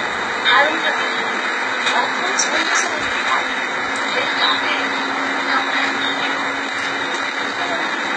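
Throughout, the audio was likely squeezed through HE-AAC compression at a very low rate, which fits about 16 kbps. The upper spectrum is rebuilt from copied lower bands rather than coded, so the treble sounds gritty and metallic, heavily damaged, and stops dead above 11.8 kHz.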